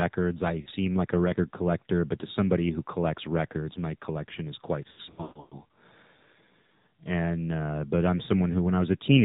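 Throughout the clip, the speech carries the AMR narrowband mobile codec sound. Nothing passes above 4 kHz, and the voice is buzzy and somewhat synthetic because it is rebuilt from a vocal-tract model driven by sparse pulses. The coarseness fits a low mode around 7.4 kbps. On a spectrogram, energy stops at a flat ceiling at 4 kHz, and the harmonics below it look smeared and grainy.

From 0.62 to 0.68 s, just before "like a record collector", lost AMR speech frames cause a brief dip and warble. The decoder covered about 40 ms, which points to two frames, by repeating the last pitch and filter settings at falling gain. The waveform shows a short sag in amplitude, and the spectrogram shows the harmonics briefly frozen and fading.

From 4.92 to 5.60 s, after "my collection is quite", a much heavier burst of lost AMR speech frames removes about 440 ms of the 600 ms span. The longest gap lasts about 140 ms and is drawn out into a fading buzz that reaches near-silence. 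Between the gaps the voice returns weak and rough. On the spectrogram, stretches of static, repeated harmonic patterns fade to dark columns. The waveform shows broken, decaying segments.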